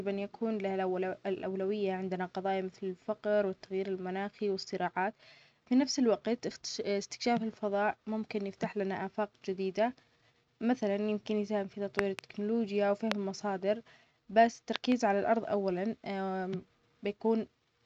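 A sharp double loud pop, about 20 dB above the speech, lands from 11.99 to 12.21 s just after "مثلاً يمكن يساهم في"; a single, stronger pop near 25 dB follows at 13.12 to 13.14 s, just before "المصادر بس"; and another double pop, again around 20 dB, sits from 14.76 to 14.94 s between "المصادر بس" and "على الأرض أولاً". Speech continues underneath each one. These are likely sudden voltage pulses from a plug, switch, static or driver glitch added to the signal.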